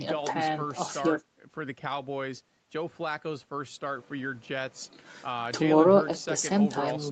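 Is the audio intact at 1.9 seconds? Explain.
Yes, the speech at 1.9 seconds is intact, with only the expected call processing that leaves nothing above about 8 kHz.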